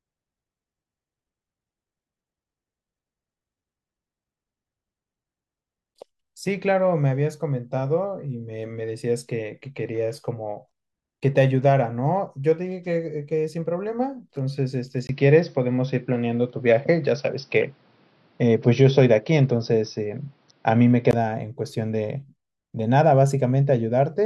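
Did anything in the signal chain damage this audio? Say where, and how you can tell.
Yes. At 15.07 s a 20 ms gap precedes duller sound with nothing above 5.9 kHz, a level shift of about 5 dB and fresh noise roughly 40 dB down, clearing at 21.13 s. This is likely an input switched to a poorer device at the capture stage.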